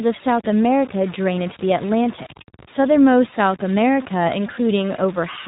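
From the start to the end of the speech, a grainy distortion rides on the signal. It moves with the sound. Quiet stretches turn gritty, and the softest parts sputter or drop out. The error sits only about 20 dB below the speech. The likely cause is low bit depth without dither. The samples appear cut to about 5 bits by truncation, not rounding. Without dither, the error tracks the waveform instead of spreading as smooth hiss.

The whole clip also carries the sound of the iLBC codec. Nothing above 4 kHz comes through, so the speech is narrowband and dull at the top. The codec works in 20 ms frames. Each frame's excitation is coded without relying on the frame before. The result is clear but rough and synthetic. The codec damage is plainly audible. The sound fits the 15.2 kbps mode.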